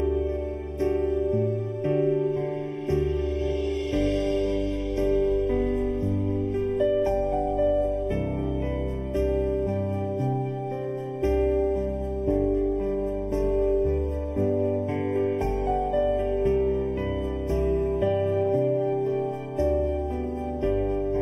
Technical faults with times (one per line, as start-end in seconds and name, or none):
0.00-21.22 channel delay (comb filtering)